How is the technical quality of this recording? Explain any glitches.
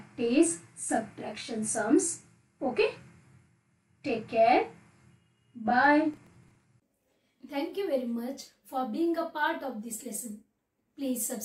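A burst of processor overload crackle runs from 5.85 to 6.64 s. For that stretch the processor fell behind on its tiny audio buffers, each only a few milliseconds long, and missed a dozen or more deadlines in a row. Each miss replayed a scrap of stale audio with hard edges, so the sound turns gritty and torn. Unlike a single dropout or clipping, it is a dense, irregular rattle that stops cleanly once the load eases.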